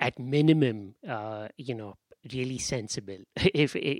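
No technical faults are audible.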